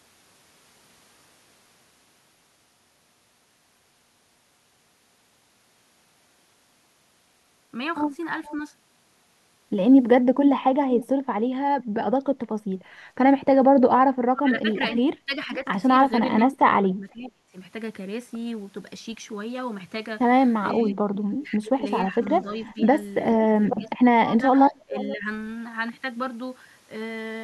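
A speech recording with two kinds of echo-canceller fault. An echo leak appears as short, faint delayed copies of the speech at 8.44–8.55 s, 10.99–11.06 s, 14.73–14.97 s and 24.94–25.17 s. Each trails the original by about 470 to 480 ms and sits roughly 15 to 25 dB below the main speech. The steady delay points to sound from the far end's loudspeaker reaching its microphone. The likely cause is that the far end's echo canceller did not fully remove that sound, so the remainder was sent back down the line. Speech suppressed in double talk shows up as the talker being pulled down while the other side is talking, at 14.06–15.65 s, 16.26–17.55 s, 20.75–22.9 s and 23.35–25.26 s. The level dips in pieces within each span, adding up to between under a second and about one and a half seconds. The drops reach roughly 40 dB at first and shrink to roughly 15 dB by the last span. The likely cause is that the canceller could not tell the local talker apart from the loudspeaker echo and attenuated both together.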